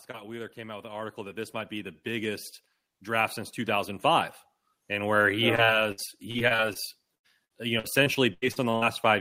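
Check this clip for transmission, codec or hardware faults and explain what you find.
Two kinds of fault are present: automatic gain rising twice in the first half, then two stretches of repeated packet loss with robotic, choppy sound in the second half.

Automatic gain rising runs from 0.07 to 2.53 s, lifting the level by about 10 dB, and again from 3.04 to 5.27 s by about 6 dB. The gain control judged the input too quiet and turned itself up step by step, so speech and background noise swell together over a couple of seconds. On the waveform the envelope ramps upward across each stretch, and the spectrogram brightens evenly at all frequencies, including the noise floor between syllables.

Repeated packet loss (robotic sound) occurs from 5.55 to 6.77 s, with nine holes, the longest 61 ms and about 19% of the stretch concealed. It recurs from 7.15 to 8.84 s, with eight holes, the longest 90 ms and about 25% concealed. 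Each missing piece is patched by extending the last received sound, and the next loss arrives soon after, so the speech turns choppy and robotic with fragments gone. The spectrogram shows smeared, flat-lined harmonic bands and repeated blocks where the fine detail freezes, while the waveform shows short repeated cycles instead of natural variation.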